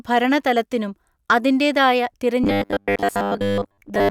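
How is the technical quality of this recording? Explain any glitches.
The back part of this speech clip has a clear glitch: robotic sound from repeated short buffers, running from about 2.44 s right to the end at 4.11 s. The voice goes rigid and metallic, with a steady buzz around 100 Hz that still loosely tracks the talking. That pitch points to a 10 ms chunk being looped, likely because fresh audio wasn't arriving in time, so most of the real signal in that stretch gets skipped.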